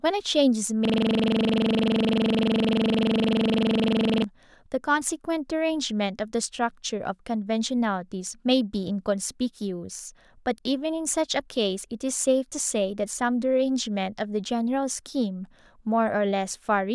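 Speech clip with a system hang loop from 0.85 to 4.24 s. The driver stalled while the hardware kept replaying one 42.67 ms slice, about 80 times, giving a 23.4 Hz stuttering buzz. That loop length fits a 1024-sample buffer.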